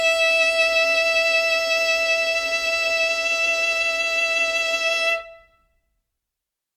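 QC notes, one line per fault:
The music signal shows no audible technical faults at any point in the clip.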